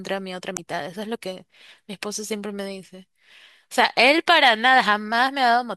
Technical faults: damaged data in a compressed stream

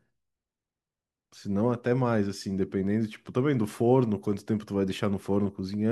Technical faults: none

